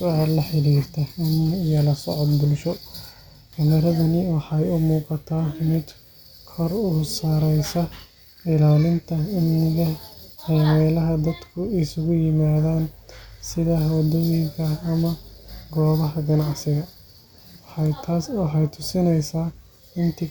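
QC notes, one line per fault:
No faults heard.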